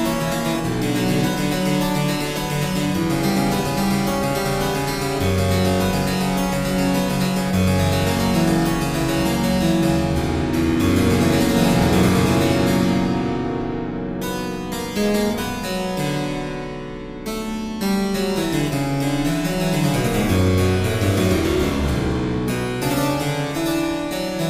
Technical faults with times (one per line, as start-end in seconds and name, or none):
none